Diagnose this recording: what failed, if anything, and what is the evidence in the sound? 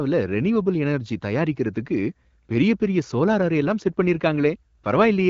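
Nothing failed: the speech has passed through an AMR wideband (HD Voice) link at 12.65 kbit/s, whose light coding loss is what that rate normally leaves, and no stage from capture to playback shows a fault.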